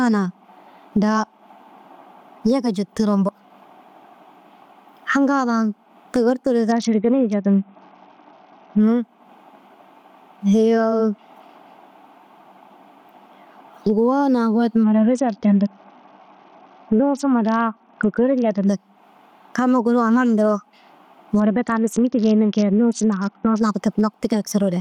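From the start and all the way through, the speech has gain pumping. The gain swings by about 20 dB. Loud and quiet passages end up squashed toward the same level. That's likely a mic gain set far too hot, with a fast limiter or compressor clamping down on each loud syllable and letting go in the gaps.

Then there are three stretches of Bluetooth SBC bit pool drop: 6.71 to 8.80 s, 14.84 to 18.67 s, and 21.40 to 23.60 s. In each one the top end goes dull and a gritty, grainy noise sits on the speech until things snap back. The sound points to the link getting congested and the bit pool falling from about 28 to 7, around 66 kbps. That starves the upper sub-bands and quantises the rest coarsely.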